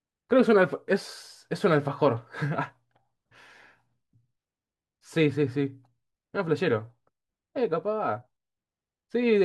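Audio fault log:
No technical faults can be heard anywhere in the speech recording, and the signal stays steady and continuous throughout.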